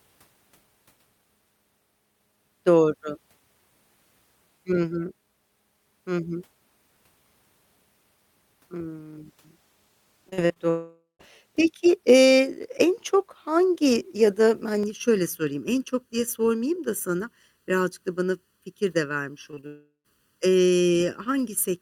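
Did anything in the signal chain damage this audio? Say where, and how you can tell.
Yes. Repeated packet loss on the network from 10.29 to 10.58 s: four gaps, about 120 ms lost, patched by extension, leaving choppy, robotic sound.

A long network dropout likely left nothing arriving from 10.70 to 11.21 s and 19.67 to 20.06 s; concealment buzz fades into silence before the audio resumes.

Channel delay with comb filtering from 14.83 s to the end: one channel lags about 0.7 ms, so mono summing notches from around 700 Hz, sounding hollow.

Short concealed packet loss at 19.51 to 19.55, 19.55 to 19.59 and 19.61 to 19.65 s: 20 ms holes filled by continuation, heard as brief smears.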